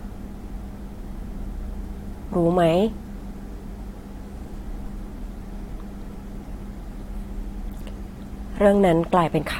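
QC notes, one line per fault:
7.80 s, damaged data in a compressed stream: a short stretch of the encoded speech arrives corrupted, so the decoder cannot make sense of the frames there. It loses its place in the bitstream and has to hunt for the next valid frame header before normal decoding resumes. That brief loss of sync comes out as a sharp, unnatural blip lasting only about 12 ms.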